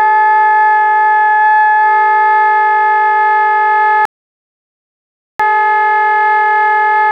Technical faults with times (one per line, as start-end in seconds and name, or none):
4.05-5.39 audio dropout to silence